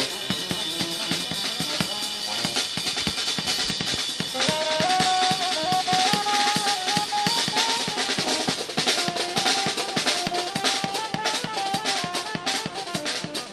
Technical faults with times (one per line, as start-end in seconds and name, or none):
none